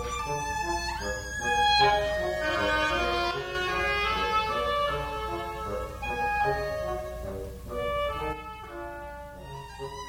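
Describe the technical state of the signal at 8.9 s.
At 8.9 s the level sits about 6 dB lower from an abrupt step at 8.33 s to the end, likely one channel dropping out, unlike a fade, which slopes gradually.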